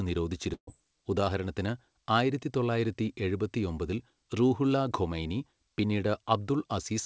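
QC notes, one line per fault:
0.54–0.69 s, burst of packet loss: about 140 ms of audio is missing just before "ഉദാഹരണത്തിന് ആയിരത്തി തൊള്ളായിരത്തി എഴുപത്തിയൊമ്പതിൽ". The receiver stretches the last sound for roughly 133 ms and fades it, leaving about 90 ms of near silence before speech resumes further on. Unlike a plain mute or a clean cut, the gap begins with a held, decaying continuation and then skips content, all within the call path's band, which stops at 8 kHz.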